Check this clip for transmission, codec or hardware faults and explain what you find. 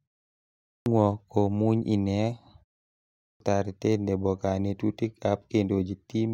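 Two clipped starts after a pause occur, at 0.45–0.86 s and 2.97–3.40 s. After silences of about 0.45 s and 0.41 s, the output device apparently drops into a sleep state and takes roughly 410 ms and 430 ms to wake. The opening of the speech is lost, so "komuny ine" and "taratet nebo" burst in abruptly. On a waveform, the envelope jumps from flat to full level with no onset. A spectrogram shows a hard vertical edge instead of a gradual build.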